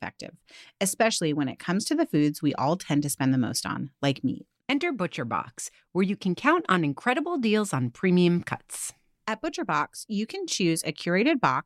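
The speech recording has no audible technical faults, and the signal stays intact throughout.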